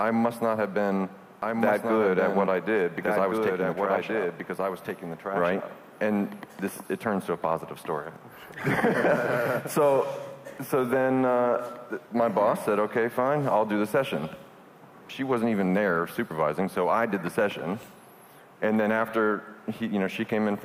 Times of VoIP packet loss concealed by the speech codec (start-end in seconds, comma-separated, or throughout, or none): none